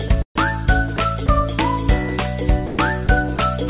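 From 0.08 to 1.41 s, the sound breaks up. Short pieces, about 80 ms in all, drop out and are replaced by a soft, flat hiss. It happens again from 2.67 to 3.39 s, with about 160 ms replaced. The likely cause is sound chopped by the voice detector, which gated quiet parts and filled them with comfort noise. The call path itself carries nothing above 4 kHz, which fits narrowband telephone coding.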